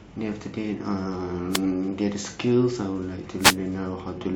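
A speech recording with two wireless microphone noise hits, from 1.50 to 1.61 s and from 3.38 to 3.58 s, each a brief swish of static lasting roughly 0.12 and 0.19 s. The cause is a dropout in the analogue FM radio link: reflected signal paths cancel the direct one at the receiver, the carrier fades, and the receiver's own noise rises over the demodulated audio until the signal recovers.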